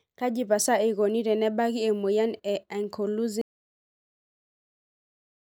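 An audio dropout to silence begins at 3.41 s and lasts to the end: the speech cuts off abruptly into silence, likely from a lost input while recording continued.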